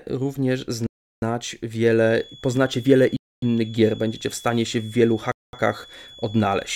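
Interrupted Bluetooth delivery, likely from interference holding up packets, lets the headphone buffer run dry at 0.87 s, cutting the speech to silence for 0.35 s before it resumes. The same Bluetooth stall recurs at 3.17 s for 0.26 s and at 5.32 s for 0.21 s. From 1.91 s to the end, the speaker-to-microphone loop likely sits right at the edge of feedback. This produces a thin, steady feedback whistle at 3.4 kHz, well below the speech level, that swells and fades slowly in level without building up.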